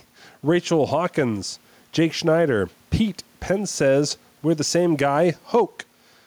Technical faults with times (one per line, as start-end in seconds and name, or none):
0.00-6.26 gain pumping